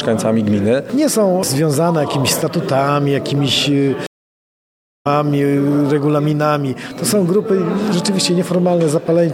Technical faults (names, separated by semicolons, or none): stream reconnect